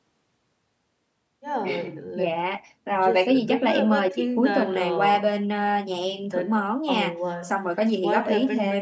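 Speech recording with no technical faults.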